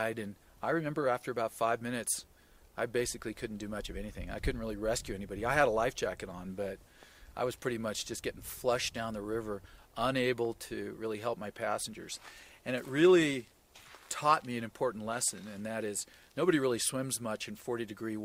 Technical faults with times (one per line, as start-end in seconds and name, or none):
none